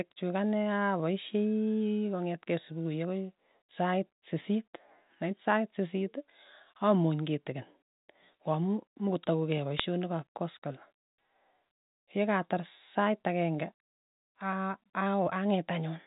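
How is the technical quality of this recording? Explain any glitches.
The speech comes through a telephone path, with nothing above 4 kHz and a faint level-following hiss consistent with G.711 mu-law coding, and one brief glitch. From 9.77 to 9.80 s a short burst of sharp crackling ticks breaks in. These are bit errors on a digital phone line. Roughly three bits in a thousand flipped, and each flip corrupted a single logarithmic sample; flips on a high bit or on the sign of a loud sample throw it far off and produce a click over the otherwise unchanged speech.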